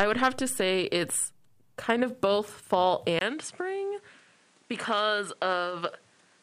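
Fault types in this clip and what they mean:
Input switched to a poorer device, from 3.19 s to the end: right after "kind of both fall" a gap of about 20 ms is followed by duller, quieter speech. Nothing remains above 11.4 kHz, the level falls by roughly 5 dB, and a new noise floor sits some 35 dB under the speech. This points to the recording likely changing over to a narrower-band microphone or headset profile with its own tone and noise.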